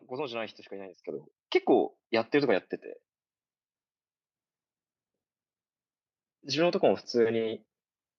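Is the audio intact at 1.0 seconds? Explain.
No. At 1.02 s the microphone volume stepped up by about 8 dB at once, lifting speech and background together, seen as an abrupt waveform-envelope jump.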